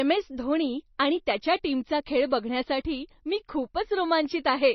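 From start to finish, the speech has likely been squeezed through MP3 compression at a very low bitrate, with heavy damage consistent with roughly 26 kbps. Starved of bits, the encoder discards everything above about 5.9 kHz, so the sound is dull and lacks air, and the s sounds lose their edge. Weak frequency lines drop in and out between frames, giving a watery, swirling texture, while consonant attacks smear instead of starting crisply.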